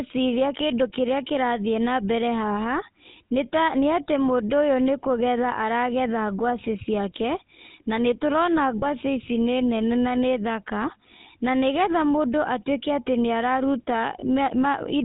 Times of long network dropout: none

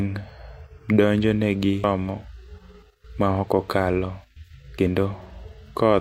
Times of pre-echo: none

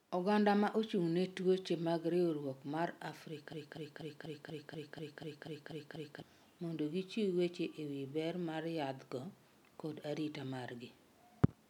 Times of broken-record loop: 3.53-6.22

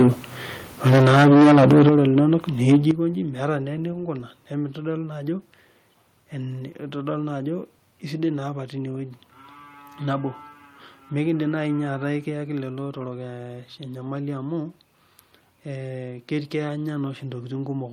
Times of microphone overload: 0.00-0.09, 0.85-2.34, 2.68-2.91

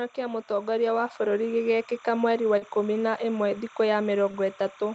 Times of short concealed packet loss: 2.57-2.63, 4.31-4.35

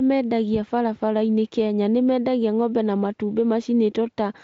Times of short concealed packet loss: none

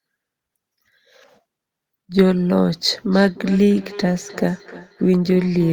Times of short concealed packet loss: none

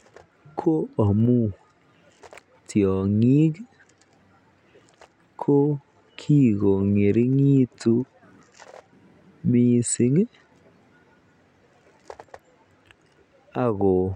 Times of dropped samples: 1.20, 10.73

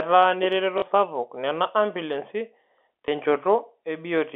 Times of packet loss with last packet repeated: 0.78-0.82, 3.06

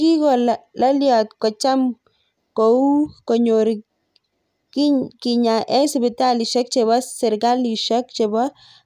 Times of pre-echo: none

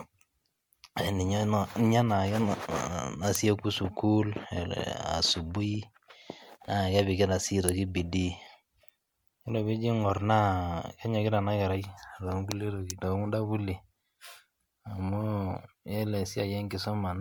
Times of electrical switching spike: 3.35, 7.69, 12.90

